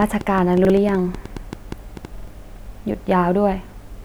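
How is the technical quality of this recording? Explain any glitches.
The recording has clear technical faults: a burst of clicks early on and two stutters where short chunks of the speech repeat.

Train of clicks, 0.02 to 2.06 s: around fifteen irregularly spaced pops, about 7.4 per second, peaking roughly 5 dB above the speech, likely from electrical interference.

Repeated buffer, 0.65 to 0.70 s and 2.18 to 2.28 s: delayed audio made the device replay a 46 ms chunk, fitting a 2048-sample buffer, once and then twice, heard as hard-edged stutters.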